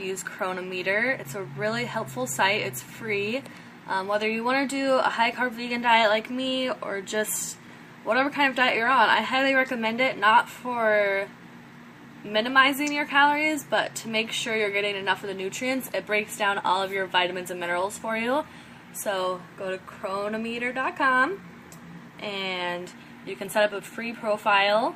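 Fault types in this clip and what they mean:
Clock drift between sender and receiver: The sending device's audio clock runs roughly 4 percent fast relative to the receiver's, so audio arrives slightly quicker than it is played out and the jitter buffer keeps filling. The receiver has to shed material to keep latency in check, and the result is a steady trickle of tiny timing hiccups spread unevenly across the whole clip rather than any single obvious break.
Repeated timing corrections: To cope with the incoming stream running at about 104 percent of its own rate, the receiver keeps trimming short pieces out of the audio, always in the same direction, from 0.11 s right through to 24.93 s. Each cut is small and the spacing between them is irregular, so the sound comes across with a faintly unsteady pace and occasional slight skips rather than clear dropouts.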